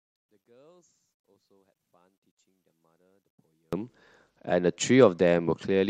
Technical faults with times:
0.00-3.73 one channel inverted
4.30-5.90 Bluetooth SBC bit pool drop

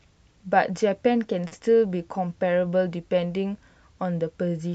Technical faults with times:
1.47-1.53 short stall from a late packet
1.59-1.62 short concealed packet loss

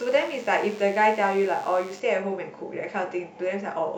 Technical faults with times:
0.00-2.00 DECT cordless phone buzz

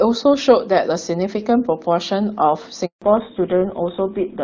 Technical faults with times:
2.86-3.02 handover gap
3.02-4.43 fallback to narrowband

